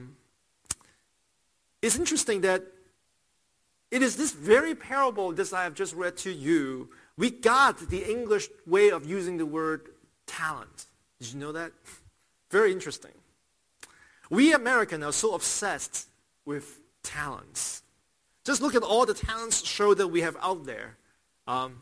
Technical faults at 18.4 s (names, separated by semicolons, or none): aliasing